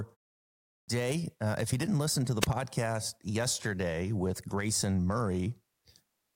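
Clipped start after a pause, from 0.71 to 0.88 s: after about 0.63 s of silence at the top of the speech, the output device has dropped into an idle state and needs time to wake and lock again before it passes sound. Roughly 170 ms of the opening is lost while it recovers, so the speech begins abruptly out of the silence with its first sounds shaved off rather than building in naturally.

Wireless microphone noise hit, from 2.41 to 2.46 s, right after "didn't listen to the": the radio link of an analogue FM microphone briefly fades as reflected copies of the signal cancel at the receiver. With the wanted signal weakened, receiver noise surges up, producing a quick swish of static lasting about 40 ms.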